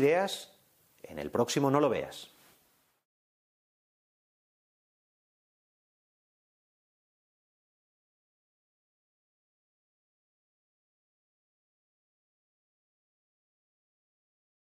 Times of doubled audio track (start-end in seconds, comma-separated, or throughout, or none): none